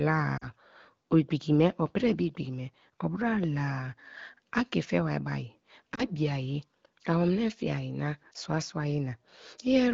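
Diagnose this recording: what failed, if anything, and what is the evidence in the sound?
Two brief dropouts break up the speech: a short drop toward near silence from about 0.37 to 0.46 s and a shorter one from about 5.95 to 6.04 s. These are lost AMR speech frames, a network-stage fault. Radio errors corrupted the frames, and the decoder filled the gaps by repeating the last good pitch and vocal tract settings at falling gain. The gaps fit about 40 ms and 20 ms of missing audio, bridged inside the AMR wideband (HD Voice) codec.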